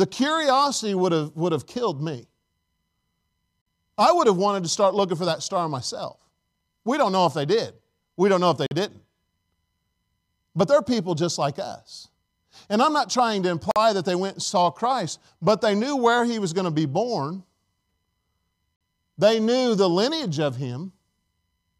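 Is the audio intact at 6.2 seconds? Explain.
Yes, the speech at 6.2 s plays through cleanly, with no dropout, click, distortion or other fault at that moment.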